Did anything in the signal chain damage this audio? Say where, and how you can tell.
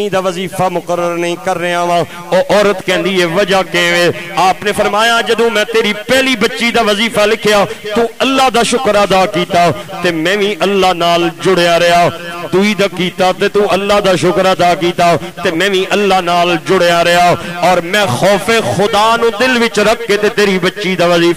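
Yes. Throughout the audio there is low bit depth without dither, likely from a sample-format conversion that truncated to about 6 bits. The grainy distortion sits only about 30 dB below the signal and follows it, gritty on quiet passages, unlike steady dither hiss or codec smearing.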